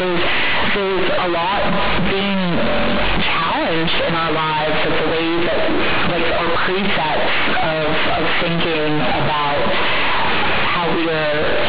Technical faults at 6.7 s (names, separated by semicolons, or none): companded audio read as linear